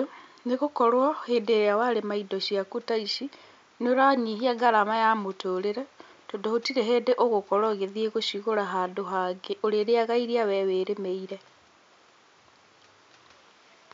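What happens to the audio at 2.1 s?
Nothing goes wrong at 2.1 s: the speech carries on intact, with only the room's own background noise sitting about 38 dB below it.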